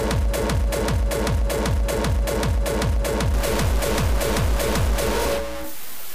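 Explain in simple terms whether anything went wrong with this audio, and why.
From 3.34 s to the end, the sound turns harsh and buzzy. Quiet moments fill with noise. The likely cause is a stuck bit.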